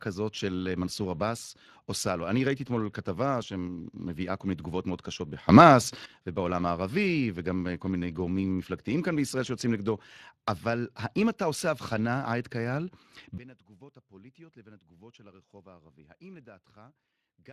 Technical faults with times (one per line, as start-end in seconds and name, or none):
0.00-17.52 Speex codec
5.49-6.06 sudden gain jump
13.38-17.52 sudden gain jump